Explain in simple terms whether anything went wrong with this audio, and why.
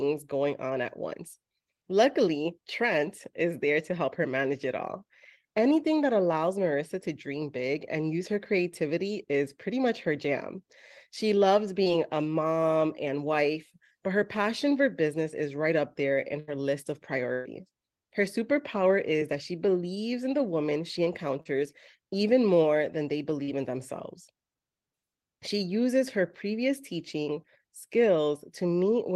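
Three brief smears break the speech: at 11.83 s, just before "a mom and wife"; at 21.41 s; and at 23.43 s, between "even more than they" and "in themselves". Each lasts only a moment and blurs the sound rather than silencing it. This is short concealed packet loss. Small pieces of the call, 20 to 40 ms each, arrived too late, and the receiver filled each hole by stretching the sound just before it.

Two longer dropouts come at 16.39 s and at 17.33 s, the second right after "list of". Each is a held, fading tail of the previous sound. Then the speech jumps ahead with part of it gone. This is a burst of packet loss. About 80 ms and 120 ms of audio never arrived. The receiver kept repeating the last sound while turning it down, then skipped on when real audio returned.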